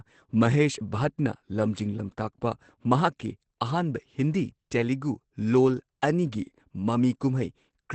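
Opus compression, likely, runs throughout: a low-rate speech mode near 12 kbps leaves nothing above 8.6 kHz, making the speech muffled, hoarse and heavily damaged.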